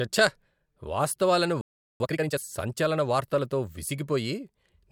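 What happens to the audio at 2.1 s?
At 2.1 s the speech is rushed along at twice its normal rate with no change in pitch. This is time-compressed catch-up, running from 2.00 to 2.38 s and ending just before "సంచలన వార్తలతో". The player is clearing a backlog by cutting out tiny slices of audio and cross-fading across the joins. That keeps the pitch steady but produces the hurried quality. The backlog comes from a playback stall just before it, from 1.61 to 2.00 s, when the speech cuts out mid-flow into about 390 ms of silence. The likely cause is that the player ran dry of buffered data or its thread was briefly blocked.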